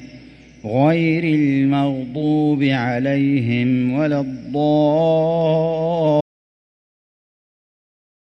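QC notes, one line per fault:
6.21–8.23 s, audio dropout to silence: input likely lost while the recorder kept writing silence, so sound cuts off mid-flow into dead silence, with no room tone, until the end.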